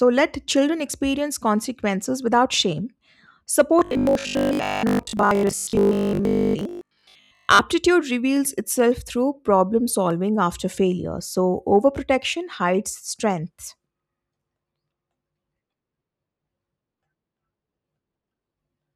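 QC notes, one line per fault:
3.79–7.59 s, robotic sound from repeated short buffers: speech becomes a stiff metallic 50 Hz buzz, likely a 20 ms chunk looping while most real audio gets skipped.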